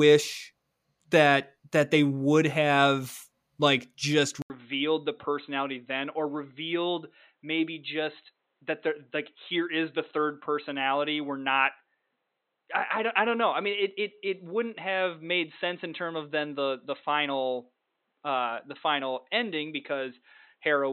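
Speech, with a clear change at 4.42 s. An 80 ms silence falls there, then the sound turns dull and boxy to the end, with nothing above 4.1 kHz. Level drops a few dB and a faint new noise floor appears. The likely cause is an input switched to a poorer device.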